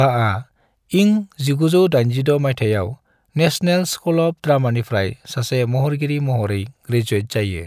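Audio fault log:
No faults can be heard in this speech recording.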